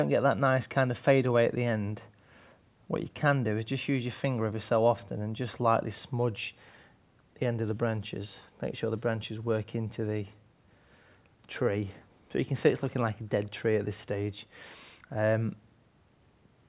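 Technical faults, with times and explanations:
Nothing stood out as a technical problem on listening to the clip.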